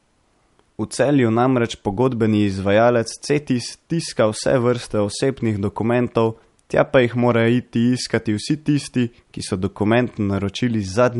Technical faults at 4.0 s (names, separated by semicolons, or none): MP3 compression